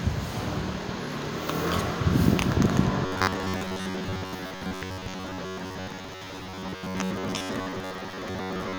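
From 3.06 s to the end at 8.78 s, the sound turns rigid and metallic. This is robotic sound from repeated short buffers. A fixed buzz near 94 Hz sits over everything. The likely cause is new audio arriving too seldom, so the same short slice, about 10.7 ms long, plays again and again while the real audio is skipped. Most of this stretch is repeated material. The original sound survives only as a rough outline under the buzz.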